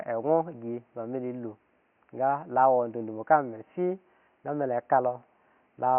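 No technical faults can be heard anywhere in the speech. A faint background noise from the room stays about 43 dB below the speech, which is part of the recording rather than a fault of the system.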